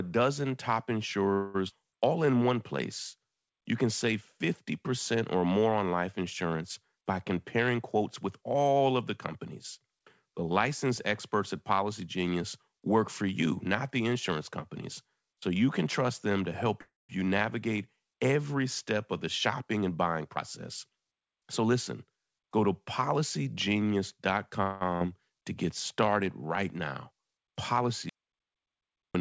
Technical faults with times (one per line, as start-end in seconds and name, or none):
1.34-1.56 call audio freeze
1.68-1.71 skip ahead
1.79-2.43 jitter buffer slow-down
6.96-8.81 jitter buffer speed-up
16.81-17.11 call audio freeze
19.12-22.18 jitter buffer speed-up
24.62-24.83 call audio freeze
24.97-25.03 short concealed packet loss
28.09-29.15 audio dropout to silence